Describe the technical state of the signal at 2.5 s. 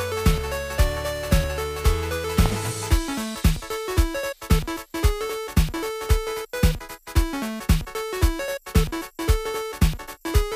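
A loud pop sits at 2.46 to 2.49 s: a single sharp burst standing roughly 15 dB above the surrounding sound, which continues underneath it. It is likely a sudden voltage step, from a switch, static or a driver glitch, shaped by the downstream circuitry.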